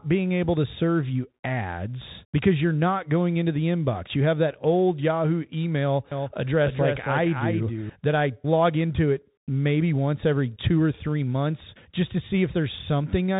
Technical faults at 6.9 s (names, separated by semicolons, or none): Bluetooth CVSD headset codec; doubled audio track